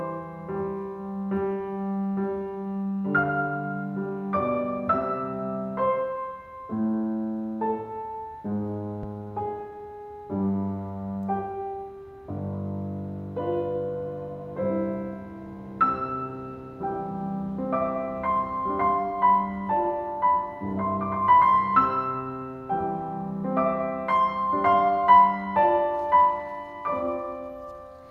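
At 9.03 to 9.14 s, a phantom power thump hits the music. A supply switched on or off on a live input. The step produces a deep thump, decaying in about 24 ms.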